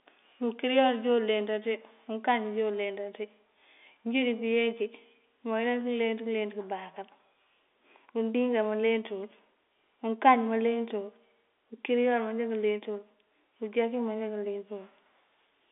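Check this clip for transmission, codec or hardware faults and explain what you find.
No faults found.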